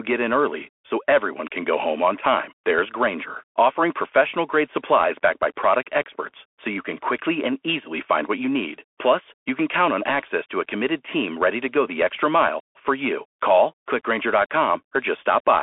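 From start to finish the speech runs through a Bluetooth CVSD headset codec, with nothing above 3.8 kHz and the band squeezed to roughly 300 Hz to 3.4 kHz. The one-bit delta coding, which fits a 64 kbps link, leaves s sounds scratchy, loud peaks gritty, and a grainy hiss underneath.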